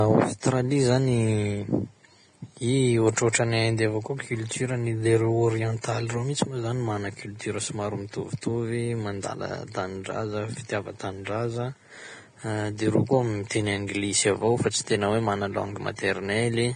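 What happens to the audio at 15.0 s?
At 15.0 s, as throughout the clip, the speech has likely been through heavy Vorbis compression, at a rate that points to around 24 kbps. Nothing remains above 9.7 kHz, and the coarsely quantised treble turns into grainy hiss, roughening tones and blurring attacks.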